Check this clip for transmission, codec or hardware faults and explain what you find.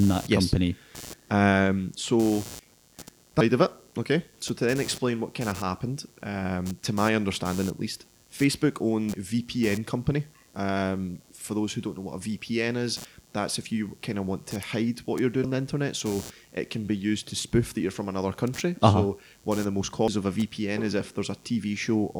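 Two faults are present: a background buzz that runs through the whole speech clip, and three short glitches from corrupted compressed data.

Computer activity noise: a faint, gritty buzz made of around a hundred pulses per second sits about 25 dB below the speech for the full clip. It comes from processor or peripheral load currents disturbing the ground that the audio circuit shares, so it follows the computer's activity, not the speech.

Damaged data in a compressed stream: brief glitches, each about 30 ms long, occur at 9.14 to 9.17 s, at 15.44 to 15.47 s between "to hide what you're" and "the internet", and at 20.08 to 20.11 s just after "one of the most". Corrupted bytes make the decoder misread frames and lose sync, producing the glitch.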